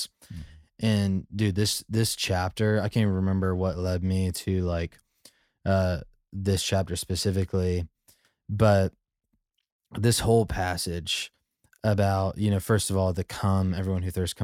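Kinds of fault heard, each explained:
No technical fault of any kind can be heard in the speech. There is nothing to list here.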